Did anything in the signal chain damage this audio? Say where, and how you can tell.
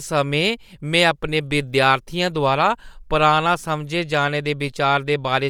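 Yes. Bluetooth LC3 compression is plainly audible throughout the speech, at the codec stage: the upper band has a grainy, breathy noise edge, likely from LC3 zeroing high-frequency content and refilling it with noise. The damage fits 10 ms transform frames at roughly 48 kbps.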